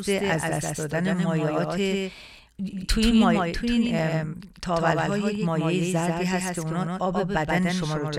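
From start to finish the speech carries a dry, flat repeat of itself, trailing about 150 ms behind and only around 5 dB quieter, with no room tail. It is a doubled audio track, likely from the same signal being captured again through a slower path.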